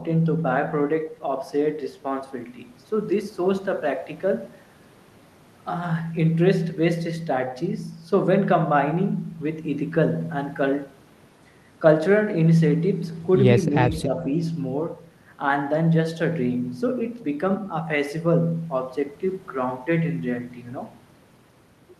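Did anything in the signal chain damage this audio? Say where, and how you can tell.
Yes. From 14.05 to 14.13 s the speech briefly sags, dipping by about 5 dB for a fraction of a second before recovering. It is too short and shallow to be a dropout. That points to call processing, most likely speech suppressed in double talk: with both ends talking, the echo canceller could not tell this talker from the returning loudspeaker echo and attenuated the whole signal.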